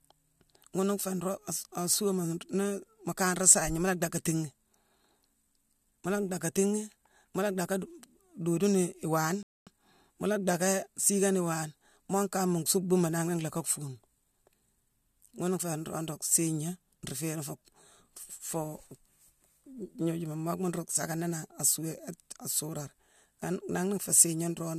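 Speech, with one rebuffering stall from 9.43 to 9.67 s: playback runs dry, goes silent for about 240 ms, then resumes exactly where it left off.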